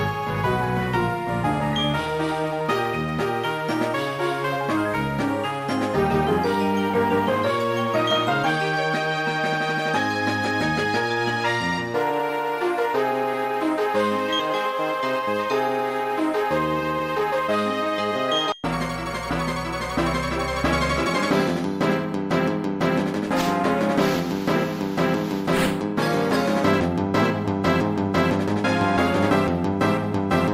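At 14.39 to 14.41 s the sound lurches forward with no gap at all. Roughly 400 ms of audio is simply absent, and the material on either side is butted together almost seamlessly. This is a skip ahead. A stretch of audio was thrown away, either lost in transit or discarded when the jitter buffer overflowed, while later audio was already queued. Playback jumped straight to it, cutting the delay by about the same amount.

From 15.01 to 15.43 s the sound briefly hurries, running at about 107% of normal speed while keeping its pitch. This is a jitter buffer speed-up. The buffer was still holding more audio than its target, so the receiver repeatedly removed tiny slices of one or a few pitch periods, a few tens of milliseconds in total, to shrink the backlog. The slightly rushed feel over that half-second comes from this compression.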